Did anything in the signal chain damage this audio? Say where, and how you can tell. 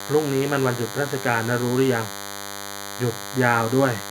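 Yes. DECT cordless phone buzz runs throughout, fairly loud under the speech. The analogue wiring rectifies radio bursts arriving every 10 ms, giving a thin 100 Hz buzz.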